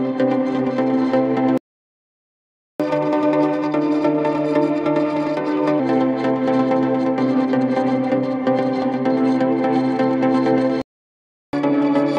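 At 1.58 s the sound halts in a playback stall and stays silent until 2.80 s, about 1.2 s, most likely because the player ran dry of data or its thread was blocked. The waveform collapses to a flat line, and the spectrogram shows a blank vertical band. From 2.80 to 5.80 s comes catch-up at higher speed. The backlog is resampled to play 1.15 times fast, raising the pitch by roughly two semitones. On the spectrogram the harmonics sit visibly higher and events are packed closer together, until both drop back to normal. A second stall runs from 10.82 to 11.53 s, about 0.72 s, again likely a starved or blocked player, and leaves another flat, empty gap. Catch-up follows from 11.53 s to the end at 1.1 times speed, with the pitch lifted by about one and a half semitones.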